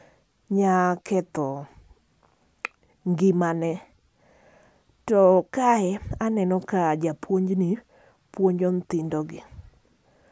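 No technical faults can be heard anywhere in the speech recording, with the signal holding steady and intact throughout.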